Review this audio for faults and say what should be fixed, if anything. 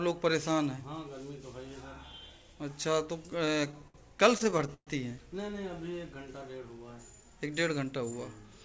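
Repeated stalls (stutter) run from 3.30 to 4.89 s. The jitter buffer keeps running dry, and the receiver stretches the last sound to fill each wait. About a fifth of that span is concealed, with the longest hold about 127 ms. Nothing is lost, but the sound drags and hiccups. Prevent it by sizing the jitter buffer for the network's actual delay variation and fixing the late packet delivery.

Jitter buffer speed-up occurs from 7.76 to 8.59 s. The receiver trims excess buffered audio by cutting short pitch-period pieces, removing roughly 70 ms. Playback runs at 107% speed with unchanged pitch and sounds hurried. Prevent it by smoothing packet arrival upstream so the buffer does not overfill and need draining.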